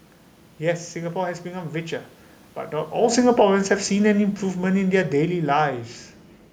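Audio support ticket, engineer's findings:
Automatic gain falling, 2.95 to 5.82 s. AGC pulls gain down about 6 dB gradually; speech and room noise sink together. Not the talker moving near 3 s.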